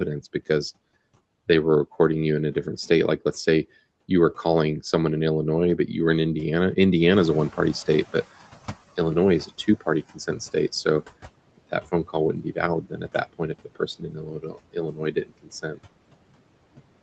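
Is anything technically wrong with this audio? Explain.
Yes, the speech shows three noise-suppression problems.

Noise suppressor artifacts run throughout: the background is pulled down by about 21 dB frame by frame, so the noise sinks between the words and rises under them. On a spectrogram the noise floor looks patchy and mottled.

Noise suppressor catching up happens from 7.11 to 9.54 s. After the room noise rises by about 12 dB near 7 s, the noise estimate takes about 2.4 s to adapt, so the louder noise comes through first and then sinks by about 18 dB. The waveform floor steps up and then tapers down.

Speech cut by the noise suppressor occurs at 10.14–10.4 s, 12.33–12.58 s and 12.81–15.79 s. The suppressor treats speech as noise and drops it by up to about 17, 15 and 20 dB. Soft syllables sound swallowed, with a total of roughly 1.5 s affected in the last stretch. Holes appear in the spectrogram's speech energy, above a floor that stops at 8 kHz on the call path.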